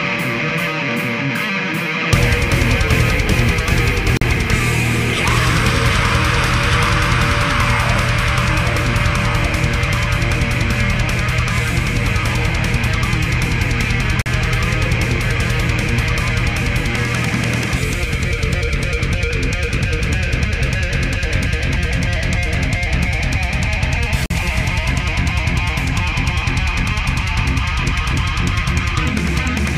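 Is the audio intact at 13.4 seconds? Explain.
Yes, the audio is intact at 13.4 seconds, with no dropout, click, distortion or other fault at that moment.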